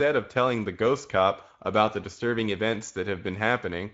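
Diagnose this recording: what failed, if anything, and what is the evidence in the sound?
Across the whole clip the speech sounds rough and hoarse, with a grainy, buzzy texture in place of clean voiced tone, and the top of the band ends abruptly at 7.7 kHz. That points to the codec stage, specifically the Speex codec. Its CELP encoder has too few bits for the excitation signal, so it can't model the voice precisely and leaves audible coding noise. The band above 4 kHz is only a shaped, noise-like fill, consistent with a wideband mode at a middle bitrate of around 17 kbps.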